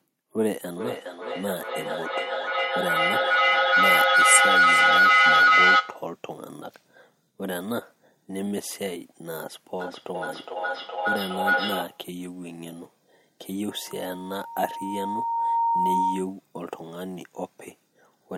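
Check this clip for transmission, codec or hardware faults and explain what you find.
Two kinds of acoustic feedback fault are present in this speech clip.

Feedback howl, 0.72 to 6.15 s and again 9.8 to 12.13 s: a microphone and loudspeaker on the same call in one room form a loop gaining level each pass. The sound narrows into a howl near 1.5 kHz, pulsing roughly every 0.4 s, peaking about 10 dB above the speech in the first episode and about 4 dB above it in the second.

Loudspeaker feedback squeal, 13.69 to 16.33 s: a microphone picks up the loudspeaker it feeds, and at 927 Hz the loop gain exceeds one. That single tone grows on its own over about two seconds into a squeal reaching about 10 dB above the signal.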